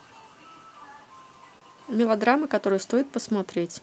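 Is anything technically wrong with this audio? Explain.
Yes. This speech has timing faults from clock drift between sender and receiver.

The drift runs through the whole clip. The sender's clock is about 2 percent slower than the receiver's. So the receiver's buffer keeps draining, and it has to keep filling time to stay in step. The tempo never quite settles. The listener hears small, uneven hiccups rather than one clear break.

Repeated timing corrections run from 0.22 to 3.22 s. The receiver keeps stretching short pieces, all in the same direction, which slows playback to about 99 percent. Roughly 50 ms is added in total. Each edit is tiny and irregularly spaced. They come across as a faint unsteadiness in the pace, not as distinct glitches.

A short stall from a late packet occurs at 1.59 to 1.63 s. A packet arrived late and the jitter buffer ran dry. The receiver held the last sound for 27 ms until the packet came, then carried on from the same point. 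Nothing is lost. A sound is simply held too long, with a slight buzz or dip, and the delay grows by 27 ms.

The Opus call path itself carries its normal coding, with the top end limited to 8 kHz.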